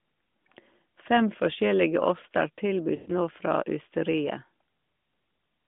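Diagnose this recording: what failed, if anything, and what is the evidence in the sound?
Network stage: lost AMR speech frames. Just after "forskjellige oster", from 2.96 to 3.11 s, the narrowband speech is drawn out and fades. The decoder reused its last good pitch and vocal tract settings at falling gain. The 120 ms gap fits six lost frames.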